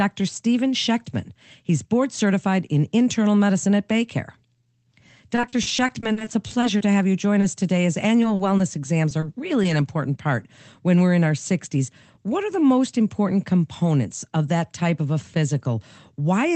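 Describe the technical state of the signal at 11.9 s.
A jitter buffer speed-up runs from 11.77 to 12.4 s: the receiver trimmed about 70 ms of pitch-period slices, so speech plays at 109% speed, hurried but unchanged in pitch.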